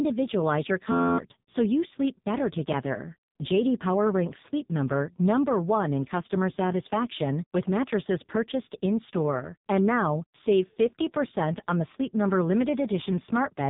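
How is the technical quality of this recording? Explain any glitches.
Technical quality is poor: the whole recording carries heavy narrowband codec damage, and there is one hang-loop glitch near the start.

AMR narrowband mobile codec: throughout, nothing above about 3.8 kHz survives. The codec rebuilds speech from a vocal tract model and a few pulses per 5 ms frame. The heavy buzzy, synthetic quality points to its lowest modes, around 5.15 kbps.

System hang loop: from 0.92 to 1.18 s, just before "so you sleep better", an 11.61 ms piece of audio repeats 23 times while the playback ring buffer cycles unattended. This fits a 512-sample buffer. It sounds like a steady buzz at 86.1 Hz, and roughly 300 ms of audio is lost.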